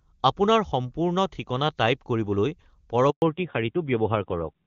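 At 3.1 s a handover gap cuts the speech for 120 ms, until 3.22 s, while the call switches networks and no frames arrive. The sound fades out within tens of milliseconds. The waveform shows a flat silent strip and the spectrogram a blank vertical band.

From 3.22 s to the end, a fallback to narrowband follows. The wideband HD Voice sound gives way to a narrowband codec, with nothing above 4 kHz, which fits AMR-NB at about 7.4 kbit/s. Speech turns duller and rougher. On the spectrogram the energy stops sharply at a 4 kHz ceiling. Before this, the HD Voice coding reaches higher in the spectrum, consistent with about 23.85 kbit/s.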